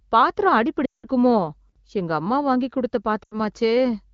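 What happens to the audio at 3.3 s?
Lost AMR speech frames, from 3.24 to 3.40 s after "எங்க அம்மா வாங்கி கொடுத்த": the decoder repeats stale pitch settings, so the speech smears and fades. On a spectrogram, harmonics stretch flat, then thin toward silence.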